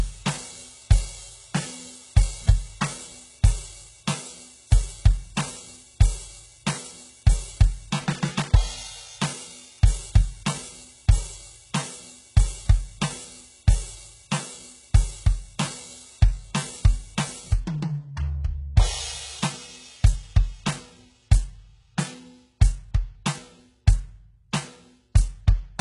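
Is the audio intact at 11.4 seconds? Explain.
No. At 11.4 seconds, as throughout the music, the treble sounds gritty and metallic and is heavily damaged, with nothing above 11.1 kHz. The likely cause is HE-AAC compression at a bitrate around 12 kbps, rebuilding highs from copied lower bands. A spectrogram shows smeared, repeated upper bands ending in a hard ceiling.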